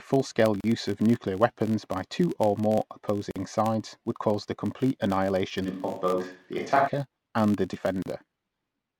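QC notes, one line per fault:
Throughout: filter restarted on every block. A steady buzz at 50 Hz rides under the speech and rises and falls with its level. The filter loses its state each block and restarts from silence, leaving a small transient every time. This fits 20 ms blocks.
0.61–0.64 s, 3.31–3.36 s, 8.02–8.06 s: gap at a join of encoded pieces. Speech drops out for 35 ms, 47 ms and 36 ms, with smeared edges, then resumes where it stopped. Separately encoded pieces were joined with their encoder delay and end padding left in.
5.67–6.86 s: switch to a distant microphone. The speech suddenly turns roomy and hollow, with thinner bass, then snaps back. The level barely changes. Room noise sits roughly 35 dB below the speech. The likely cause is the close microphone dropping out and a farther one filling in.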